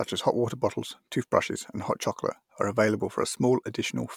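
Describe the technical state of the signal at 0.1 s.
At 0.1 s the speech signal is intact, with no fault present at that moment.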